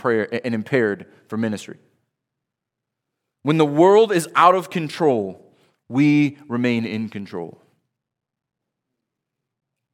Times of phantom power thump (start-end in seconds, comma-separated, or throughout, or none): none